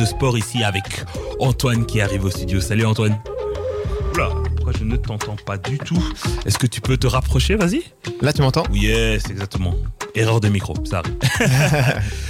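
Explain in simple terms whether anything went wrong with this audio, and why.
Nothing went wrong with this audio that a listener can pick out. No moment in it stands out as a fault, so there is nothing to explain or fix.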